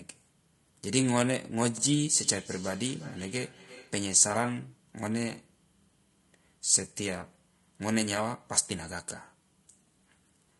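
Low-delay AAC compression runs throughout: the speech sounds rough and grainy, with noise between harmonics and a dulled top band, likely from AAC-ELD at around 32 kbps.

Overlapping chunks occur at 1.78 to 1.83 s, where a 50 ms piece plays twice at a 4.0 s chunk join, giving a brief stutter.

Feedback echo between two devices runs from 2.12 to 4.11 s. A second device's playback re-enters the microphone, so the speech returns roughly every 0.4 s, thinner and ringing, peaking about 19 dB below the speech.

AAC frame loss with concealment hits at 3.75 to 3.78 s: 20 ms, which fits a single missing frame, is filled from the previous spectrum and heard as a short smeared, noisy patch.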